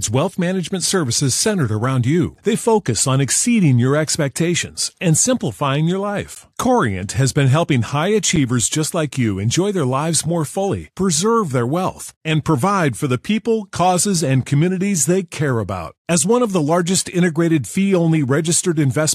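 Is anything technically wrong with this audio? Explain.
Yes. A gap between stream segments at 6.35 s: two 2-second segments' timestamps leave about 14 ms unfilled, so the player inserts silence, a hard-edged hole with nothing lost.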